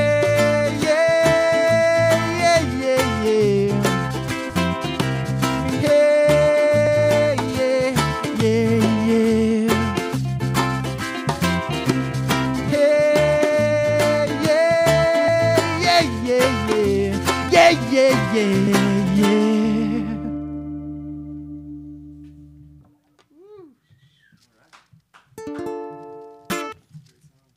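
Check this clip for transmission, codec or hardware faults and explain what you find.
Three faults are present, all of one kind. Compressed frames skipped at 6.86 s, 15.28 s and 18.67 s: missing or rejected frames make the sound jump ahead by roughly 70 ms, 150 ms and 200 ms, which fits losing whole frames of about 32 ms each.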